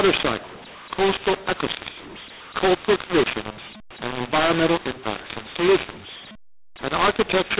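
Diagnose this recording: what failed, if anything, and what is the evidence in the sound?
The failure is at the codec stage: mu-law and A-law mixed up. The speech was written as mu-law but read back as A-law, so every level is mis-mapped across the whole clip. It sounds harsh and distorted, and pauses fill with noise. Clipping would flatten peaks and leave the gaps silent.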